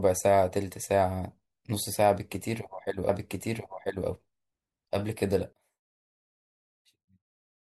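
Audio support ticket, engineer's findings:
Stream segment repeated, 3.09–4.08 s: about 1 s of speech replays, with a small blip at the jump back. Probable component: player segment queue fetching the same chunk twice. Unlike a stutter or buffer loop, it is one clean full-length replay that then continues normally.

One channel inverted, 5.53 s to end: centred speech suddenly drops about 27 dB, leaving a faint residue. Likely cause: polarity flip on one stereo leg, with the common content cancelling in the mono sum. Unlike a dropout, a faint difference signal remains rather than silence.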